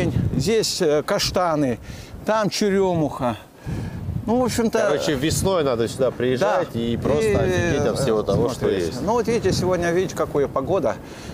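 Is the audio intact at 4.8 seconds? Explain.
Yes, the audio at 4.8 seconds plays through cleanly, with no dropout, glitch or other technical fault at that point.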